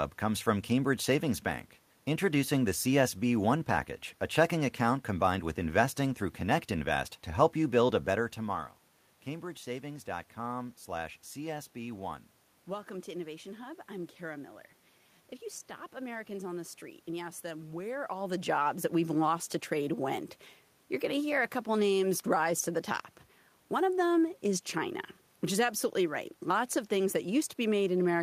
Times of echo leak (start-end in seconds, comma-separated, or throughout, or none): none